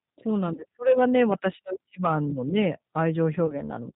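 Throughout, the G.729 codec at 8 kbit/s leaves the speech band-limited below 4 kHz, slightly rough and synthetic, with plainly audible coding damage. From 0.55 to 0.65 s, VoIP packet loss concealed by the speech codec replaces about 30 ms, consistent with one lost packet, with a fading extrapolation that weakens the following speech. From 2.58 to 3.02 s, hard clipping overdrives peaks by about 1 dB, flattening their tops and adding crackle. A second concealed packet loss, again about 30 ms, recurs from 3.46 to 3.55 s with the same fading decay.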